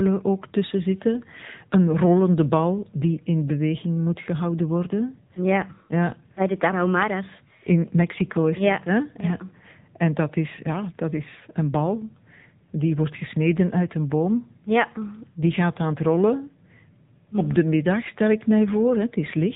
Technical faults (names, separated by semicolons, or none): AMR narrowband mobile codec